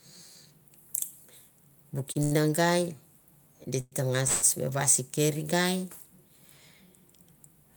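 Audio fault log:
2.12–2.18 s and 2.23–2.34 s, short stall from a late packet: the last sound is held for about 29 ms, then 82 ms, while the jitter buffer sits empty, then resumes with nothing lost. On a spectrogram these show as smeared horizontal bands.
3.81–3.95 s and 4.28–4.45 s, call audio freeze: sound stretches into a fading buzz for about 111 ms and 149 ms, the first ending in a 10 ms silence, likely from packets held up in transit. The waveform shows repeating cycles that shrink in size.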